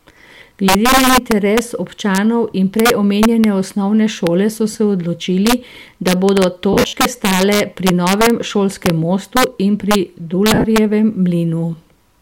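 Throughout the speech, integer overflow hits the loudest peaks. The signal is driven about 4 dB past full scale, and roughly one percent of samples wrap to the opposite sign instead of being limited. Each one is heard as a violent crack, far harsher than the flattened buzz of clipping.

Lost LE Audio frames follow. At 4.72 s, between "omenjene osnovne šole so" and "se odločili da bodo", 30 ms is lost, which fits three 10 ms frames. The decoder replays the last spectrum with scrambled phase, so the sound briefly smears into noise. From 6.73 to 6.93 s, after "se odločili da bodo" and before "stale pri novem šolskem", 150 ms of loss is scattered across 200 ms, with the longest gap around 70 ms. There the concealment decays toward silence. At 10.54–10.64 s, just after "šolskem mostu in pri", 70 ms of loss spreads over 100 ms. Unlike a plain dropout, these gaps are filled with a noisy, fading echo of the preceding sound.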